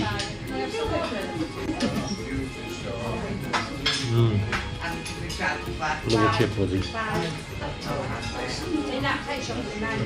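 No technical faults are audible.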